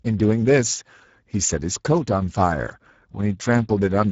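Speech running the whole way through carries plainly audible Speex codec damage. The voice has that hoarse, grainy, noisy texture you get when a CELP coder is starved of bits for the excitation signal, and the degree of it points to something around 10 kbps. There's also nothing at all above about 7.7 kHz, so the top end sounds closed off, typical of a wideband Speex mode in old VoIP or game chat.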